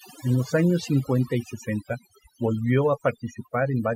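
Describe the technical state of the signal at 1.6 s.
Overdone noise removal is present at 1.6 s and throughout the speech. The noise reduction is set too aggressively, cutting individual frequency bands to almost nothing wherever they sit near its noise estimate. The background drops and breaks up into twinkling specks, while quieter voice components vanish.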